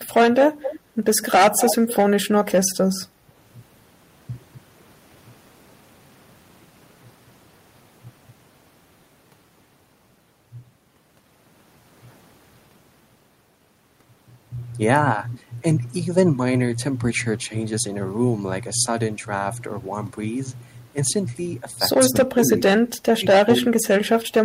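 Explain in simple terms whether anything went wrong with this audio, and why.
The speech dips or cuts out at 0.04–0.11 s, 2.26–2.88 s, 3.27–3.32 s and from 22.08 s to the end. This is likely speech suppressed in double talk: with both sides talking at once, the echo canceller mistook this voice for echo and turned it down.

A delayed repeat of the voice, about a quarter second behind, appears at 0.61–0.79 s, 1.21–1.25 s and, strongest, 1.57–1.95 s. This is likely echo leak, where a loudspeaker's sound reached the microphone and wasn't fully removed.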